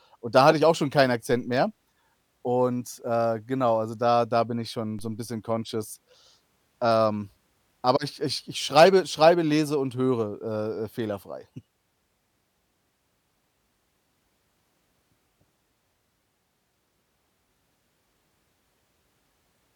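At 4.99 s, between "da bin ich schon" and "so 'n bisschen conscious", the waveform's zero line suddenly shifts, a DC step of about -33 dBFS, as if a converter recalibrated or an offset input was switched into the path. The offset is not held; it drains away through what behaves like a 2 Hz high-pass. The jump comes through as a single low thump, while the speech carries on unaffected.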